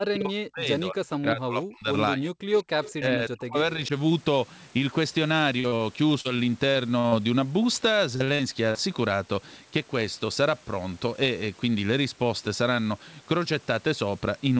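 From the start to 1.91 s, again from 2.13 to 2.46 s, and from 2.62 to 3.92 s, speech is suppressed in double talk. The echo canceller most likely could not tell the near talker apart from loudspeaker echo while both sides were active, so it turned everything down. The speech dips by as much as about 40 dB, and across roughly one and a half seconds, a third of a second and one second respectively it thins out or cuts away in pieces.

Inside that last stretch, at 2.84 to 2.91 s, an echo leak lets a brief scrap of the voice come back. The far end's canceller likely failed to remove all of what its microphone picked up from the loudspeaker. The residue returns about 199 ms late and about 15 dB below the speech, heard as a ghost of the voice for a fraction of a second.

At 5.60 to 5.67 s and again at 5.68 to 5.75 s there is short concealed packet loss. In each case about 40 ms of audio never reached the decoder in time, and the receiver extended the last sound to cover the hole before blending back into real audio. 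The two patches sit almost back to back, giving a quick smear and wobble in which a short sound can drop out.

Immediately after, at 5.76 to 5.83 s, comes a short stall from a late packet. The packet was not there when due, the jitter buffer ran dry, and the receiver stretched the preceding sound for about 44 ms until the packet arrived. Nothing is lost here, but one sound is held too long, with a slight buzz or dip as the stretch plays out.

From 6.21 to 7.15 s and from 8.16 to 8.78 s, repeated packet loss gives a robotic sound. Holes arrive one after another, five in the first span and four in the second, the longest about 50 ms and 41 ms. Each is patched by continuing the last sound, so about 19 and 24 percent of those spans is synthesised. The speech turns choppy, with fragments missing.

At 11.06 to 11.75 s there is a jitter buffer speed-up. The buffer held more audio than its target, so the receiver trimmed short pitch-period pieces over and over, removing about 50 ms in total. 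Playback runs at about 106 percent speed with the pitch unchanged, and the speech sounds hurried. Throughout the clip nothing reaches above 8 kHz, which fits the G.722 call codec and the normal microphone processing.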